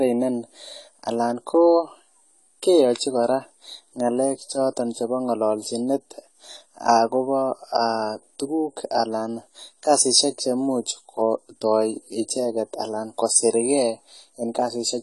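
From start to finish, the speech sounds dull and smeared. Nothing is heard above 11.5 kHz. Sibilants turn fizzy and sustained sounds warble. The likely cause is AAC compression, which fits a low bitrate near 32 kbps, where the encoder drops detail it judges inaudible.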